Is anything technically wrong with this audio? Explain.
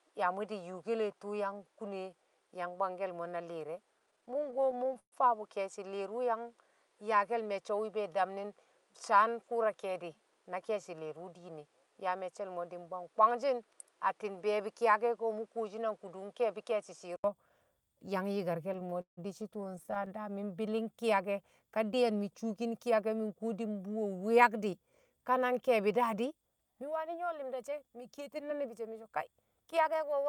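Yes, there are three kinds of problem in this speech.

First, the sound is duller than it should be from the start up to about 17.24 s, with a faint new noise floor sitting well below the speech. At 17.24 s there's a gap of about 80 ms, and then it opens up again at roughly the same level. That's most likely an input switched to a poorer device, with a narrower-band mic in use for the first stretch and the better one taking over after the switch.

Second, there's repeated stalling (stutter) from 3.99 to 5.14 s and again from 18.73 to 20.11 s. Packets were turning up late, so the jitter buffer kept running dry, 21 times in the first stretch and 23 in the second. Each time, the receiver stretched the last bit of sound to cover the wait. That's 326 ms and 376 ms of fill, with the longest gaps at 128 ms and 162 ms. Nothing is actually lost, but more than a quarter of each stretch is filler, so the speech drags and judders.

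Third, there's a jitter buffer speed-up from 15.75 to 17.12 s and again from 28.19 to 29.09 s. The buffer had built up more audio than it wanted, so the receiver trimmed out short pitch-period-sized slices back to back, around a tenth of a second in the first stretch and a bit less in the second. Playback runs at about 108% with the pitch unchanged, so those bits sound a little rushed.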